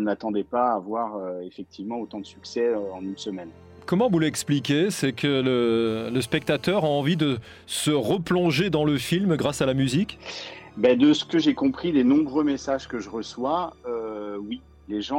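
From 5.87 to 7.26 s, GSM phone buzz. A 2G phone on a call bursts at 217 Hz, and the circuit rectifies it. Steady raspy buzz, about 29 dB below.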